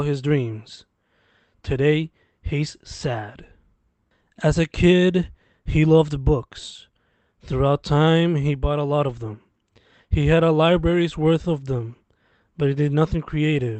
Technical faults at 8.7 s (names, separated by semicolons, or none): none